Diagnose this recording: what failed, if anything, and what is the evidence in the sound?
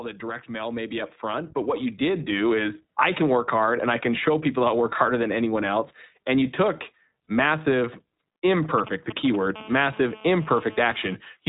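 The speech has passed through the iLBC codec, which is a codec-stage fault. The audio is narrowband, with nothing above 4 kHz, and has a rough, slightly synthetic texture throughout. The codec damage is plainly audible. The 20 ms framing fits the 15.2 kbps mode.

Automatic gain rising happens in call processing. From 0.2 to 2.58 s, voice and background swell together by about 10 dB. The gain control judged the input too quiet and raised its gain gradually instead of applying a single step.

Lost iLBC frames come from a network-stage fault. At 7.24 to 7.28 s, a 40 ms gap is filled with a held, faintly buzzy vowel-like sound, which fits two lost 20 ms frames. The decoder repeated the last pitch cycle mixed with noise, and clean speech returns immediately after.

GSM signalling bursts come in through the analogue wiring. From 8.78 to 9.36 s, a galloping pattern of short 217 Hz buzzes appears, roughly 10 dB below the speech. 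A nearby 2G phone was sending short groups of radio bursts, and the audio circuit rectified them.

GSM phone buzz follows, also through the analogue wiring. From 9.56 to 11.15 s, a steady, hard 217 Hz buzz rich in harmonics sits about 19 dB below the speech and is unrelated to it. A nearby 2G phone, in a call, is transmitting continuous bursts that the circuitry demodulates.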